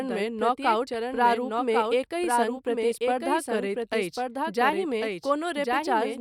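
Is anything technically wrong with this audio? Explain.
Yes. Throughout the speech, a doubled audio track is present: a second full-band copy trails the original by about a second, sitting only a few decibels quieter. The likely cause is the same signal being captured again through a slower path, or an edit leaving two copies out of step. Unlike room echo or reverb, the trailing copy has no decay, no room colouring and no further repeats. It is one clean duplicate, so the speech seems to overlap itself.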